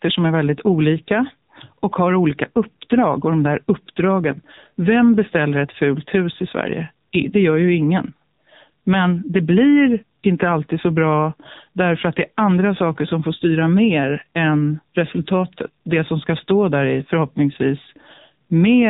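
Speech runs through an AMR narrowband mobile codec throughout. A spectrogram shows a hard 4 kHz ceiling, and the voice sounds heavily buzzy and synthetic, consistent with 6.7 kbps.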